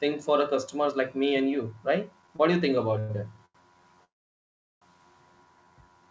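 This is speech that has come through a call path. The band stops at 8 kHz, which fits a wideband codec such as G.722. From 2.22 to 3.56 s you get repeated stalls (stutter): five short hiccups where the receiver stretches the last bit of sound to cover packets that turned up late. The longest is about 93 ms. Together they add roughly 230 ms, close to a fifth of that stretch, so it drags and judders, but nothing actually drops out. Then from 4.04 to 4.83 s there's a call audio freeze. The sound hangs for 770 ms, and almost all of that (730 ms) fades to silence before it picks up exactly where it left off. The likely cause is packets getting held up in transit long enough for the jitter buffer to run dry, so a gap gets inserted rather than anything being lost.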